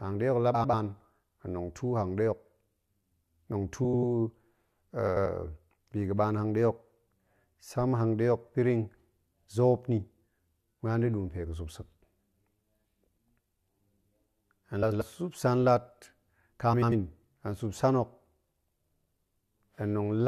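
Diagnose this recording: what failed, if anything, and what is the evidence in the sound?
The delivery path reordered frames: at five points two adjacent blocks of roughly 93 ms each, which fits four frames of about 23 ms, reached the decoder swapped. Frames out of order appear at 0.54–0.74 s just after "hangɗe hok la", 3.84–4.04 s, 5.07–5.26 s, 14.82–15.02 s just before "sup san", and 16.72–16.92 s just before "hen sup san hok". Each 0.2 s stretch of speech plays with its halves exchanged, a garbled flutter, and no time is lost.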